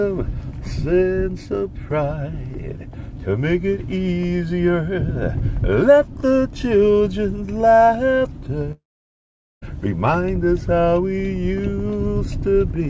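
From 8.72 s to 9.64 s the sound smears into a brief fading buzz and then drops to near silence for about 0.81 s before returning with roughly 0.9 s missing, a long network dropout likely caused by packets failing to arrive during the call.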